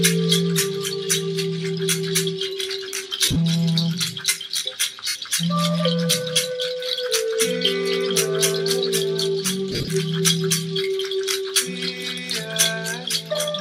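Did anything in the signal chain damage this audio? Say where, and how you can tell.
Yes. Lost LE Audio frames in the Bluetooth link at 3.25–3.37 s, 5.08–5.15 s and 9.71–9.88 s turn briefly into a noisy smear. The LC3 decoder conceals each gap by repeating the last spectrum with randomised signs. The 9.71 s loss, runs up to roughly 50 ms, fades.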